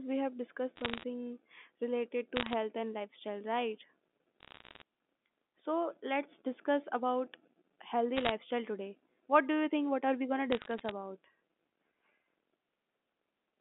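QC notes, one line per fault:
0.76–1.04 s, 2.36–2.54 s (just before "and lifestyle right"), 4.40–4.82 s (just after "and lifestyle right"), 8.17–8.32 s, 10.52–10.91 s (just after "are we going to"): bit errors on a digital phone line. Short bursts of sharp ticks and crackle sit over the G.711 telephone-band speech. Flipped bits corrupt individual logarithmic samples, and hits on sign or high-order bits throw single samples far off the waveform. The error rate is around one percent in the densest bursts and noticeably lighter in the last.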